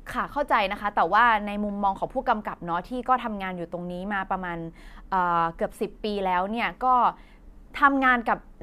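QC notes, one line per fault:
No technical faults were found in the signal at any point in the recording.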